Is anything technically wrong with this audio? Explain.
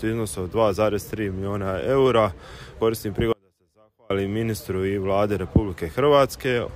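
Yes. From 3.33 to 4.10 s there is an audio dropout to a faint residue. The sound cuts out abruptly for about 0.78 s, leaving only a faint trace roughly 35 dB down, then snaps back. The likely cause is a brief loss of the signal while the path after it stayed live.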